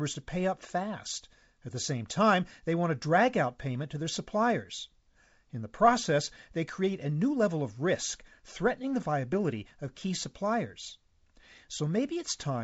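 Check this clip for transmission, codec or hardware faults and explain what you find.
Nothing to report: the speech comes over G.722 wideband coding at 64 kbit/s, holding the band up to 7 kHz with at most a faint hiss in the upper band.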